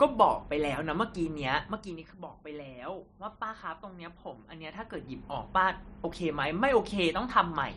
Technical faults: zipper noise

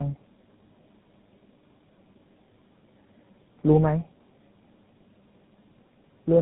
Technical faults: tandem speech coding

